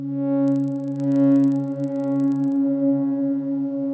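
Resampler restarted on every block, 0.48 to 2.56 s: each 40 ms block converted from 48 kHz to 16 kHz independently, leaving edge errors heard as ticks at 25 Hz.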